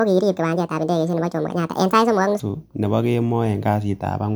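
From the start to 2.40 s the speech is high and hurried, running 1.65 times too fast, with the pitch lifted by about ten semitones so the voice sounds thin and chipmunk-like. At 2.40 s speed and pitch drop back together to the natural rate. This is a section at the wrong speed: that opening stretch was likely played back against a mismatched clock, so timing and pitch shifted as one.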